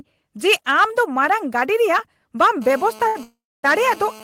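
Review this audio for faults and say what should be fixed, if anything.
From 2.62 s to the end of this speech clip there is GSM phone buzz: a hard, raspy tone at about 217 Hz, sitting about 22 dB below the speech and carrying a dense stack of harmonics. A nearby 2G handset is transmitting in bursts at that rate, and the audio circuitry rectifies each radio pulse into sound. Unlike mains hum, the fundamental is 217 Hz rather than 50 or 60 Hz, and it sounds buzzy rather than smooth. It holds steady instead of coming and going, which fits a phone in an active call. Keeping phones away from the recording chain, or using shielded, balanced cabling with RF filtering, prevents it.

At 3.07 to 3.17 s there is a short stall from a late packet. The sound is held for 78 ms, and then the speech resumes from exactly where it paused. A packet missed its slot and the jitter buffer ran dry, so the receiver stretched the last sound until the packet came. 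Nothing is lost, but everything afterwards runs 78 ms later. What separates this from a freeze is its brevity. A larger or adaptive jitter buffer would absorb delays of this size.

From 3.23 to 3.65 s there is a call audio freeze. The last sound is continued and decays, leaving about 260 ms of silence before the speech picks up where it stopped. A 401 ms hole has been inserted and nothing is missing. The likely cause is packets held up in transit, which emptied the jitter buffer until they arrived. A dropout would remove audio. This only delays it, adding about 0.4 s of latency. Better network prioritisation (QoS) and a buffer sized for such delay spikes would prevent it.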